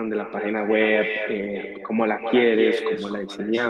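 Speech runs through the whole clip with an echo with no canceller: every phrase is trailed, about a fifth of a second later, by a thinner copy roughly 6 dB quieter. The far end is playing the call over a loudspeaker into its microphone, and nothing strips that return. Unlike room reverberation, which smears into a smooth decay, this is a distinct repeat arriving after a gap, the network round trip.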